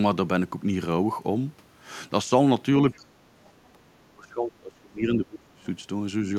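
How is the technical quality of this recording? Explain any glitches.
The recording has two echo-control faults, concentrated between about 3 and 6 seconds.

Speech suppressed in double talk occurs at 2.96–3.12 s, 3.73–3.78 s and 4.14–5.67 s. The speech level dips by roughly 15, 10 and 25 dB respectively, with the last stretch heavily ducked. The likely cause is an echo canceller that treated overlapping far-end sound as echo and attenuated everything.

The other side's voice leaks through from 3.44 to 3.68 s. It is a faint second voice, well below the main speech at around 35 dB down. This is likely residual loudspeaker echo that the canceller failed to subtract from the microphone signal.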